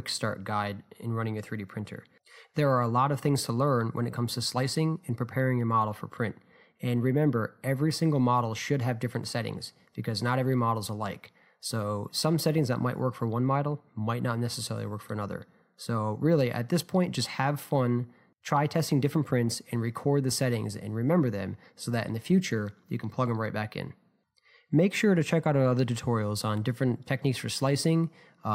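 Nothing goes wrong anywhere in this audio, so there's no technical fault to point out at any moment.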